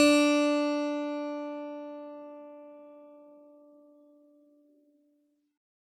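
Generation loss runs throughout the music, likely from about seven successive MP3 re-encodes near 128 kbit/s, piling up swirly, hollow smearing and blurred attacks.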